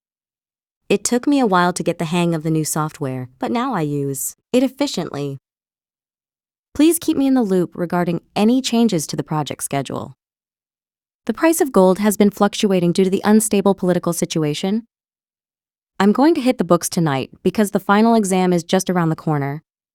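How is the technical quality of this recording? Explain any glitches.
No glitches to explain here: nothing jumps out as a technical problem anywhere in the recording.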